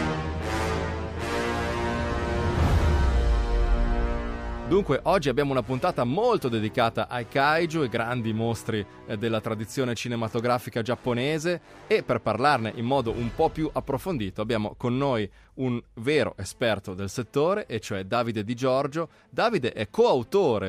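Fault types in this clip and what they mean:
No faults can be heard anywhere in this audio.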